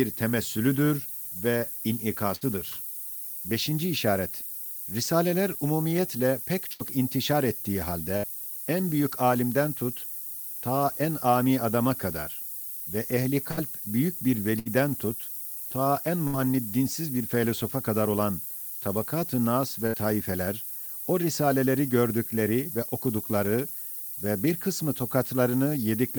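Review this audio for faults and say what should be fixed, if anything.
There's a steady, thin hiss across the whole speech track that climbs sharply toward the top of the band. That's low bit depth with noise shaping. It sounds like about 6 bits, with the rounding error pushed upward, and it sits only around 10 dB under the speech. Render or export at 16 bits or more.

You'll also hear seven bursts of packet loss, each about 90 ms, at 2.35, 6.73, 8.17, 13.51 (after "adama kadar ve ehli"), 14.59 (after "büyük bir"), 16.27 and 19.87 s (after "nas ve"). In each one the receiver stretches the last sound for roughly 60 ms as a fading buzz or hiss, then skips ahead with about 60 ms of audio gone. A larger jitter buffer, or FEC or redundancy on the link, would cover these.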